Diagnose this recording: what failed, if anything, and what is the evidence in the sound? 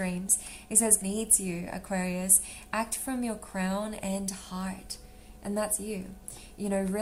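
A skip ahead at the network and jitter-buffer stage occurs between 1.01 and 1.03 s. Playback jumps forward with no gap or fill, and roughly 0.4 s of sound is simply missing, the two sides butted together. Queued audio was dropped, in transit or by the buffer on overflow, cutting the delay by about that amount.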